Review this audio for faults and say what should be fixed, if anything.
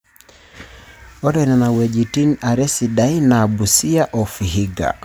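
Nothing in this speech recording needs fixing. No faults can be heard at any point, so there is nothing to prevent.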